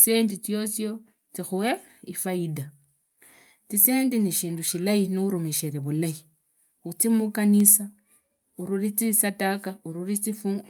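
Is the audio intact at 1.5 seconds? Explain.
Yes, at 1.5 seconds the speech plays through cleanly, with no dropout, click, distortion or other fault to be heard at that moment.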